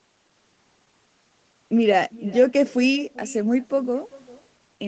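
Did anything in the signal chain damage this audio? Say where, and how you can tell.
Yes. Throughout the speech, every phrase is trailed roughly 0.4 s later by a faint, thin copy about 21 dB down. This is echo with no canceller: the far end's loudspeaker feeds its microphone and the call path returns it uncancelled, alongside the normal Opus codec limit near 8 kHz.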